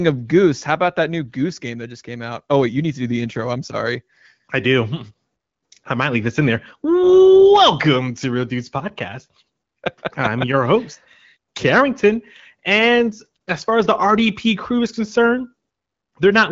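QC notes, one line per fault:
No faults are heard in this speech clip. The AMR wideband (HD Voice) codec path is working as expected, with only light coding texture, a band that stops near 7.4 kHz, and a clarity that fits a mid-to-high rate around 15.85 kbit/s.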